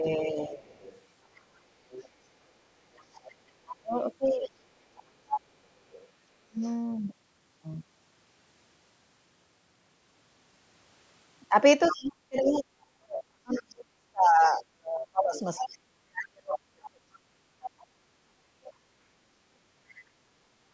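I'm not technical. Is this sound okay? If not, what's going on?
No. Two kinds of fault are audible. First, speech suppressed in double talk: the talker's voice dips or cuts out briefly from 0.0 to 0.62 s, from 3.8 to 4.55 s and from 6.35 to 6.64 s, then fades badly on and off from 11.92 to 18.82 s. This is likely the call's echo canceller turning everything down while both people spoke at once.

Second, the other side's voice leaking through: a faint second voice sits underneath from 0.62 to 6.71 s, somewhat louder from 11.82 to 17.84 s, and as a tiny scrap at 19.89 to 19.95 s. The likely cause is the talker's loudspeaker sound reaching the microphone without being fully removed.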